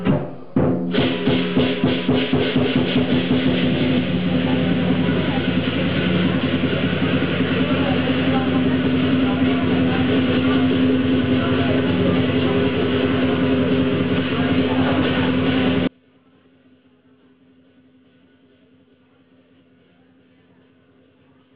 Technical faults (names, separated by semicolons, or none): audio dropout to a faint residue